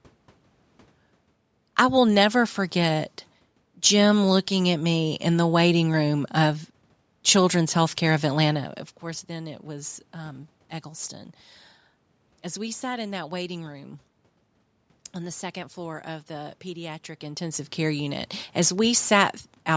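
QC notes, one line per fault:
No faults found.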